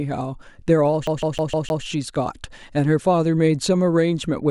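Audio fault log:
1.07 to 1.84 s: CD stuck on one turn. The same 155 ms slice of speech repeats five times in a fast, even stutter. A short mute marks each jump. A scratch is throwing the laser back one track at the same spot every revolution.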